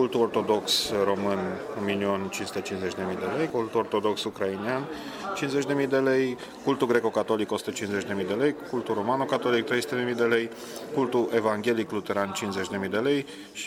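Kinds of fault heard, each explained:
No technical faults can be heard anywhere in the clip. Nothing in the sound calls for a fault to be listed or explained.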